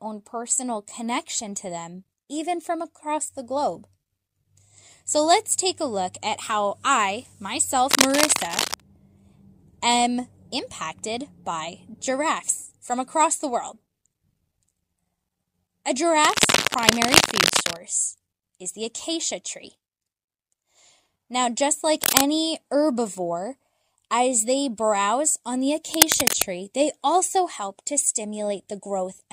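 Cable scratch noise at 7.91–8.80 s, 16.23–17.76 s, 22.03–22.34 s and 25.94–26.44 s: uneven rustling bursts, level with or louder than the speech, likely from a worn connector being moved.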